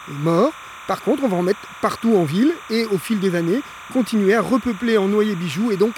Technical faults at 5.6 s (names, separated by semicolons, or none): timecode bleed